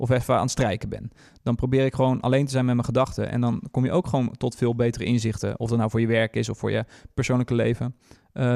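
No technical faults occur at any point in the recording.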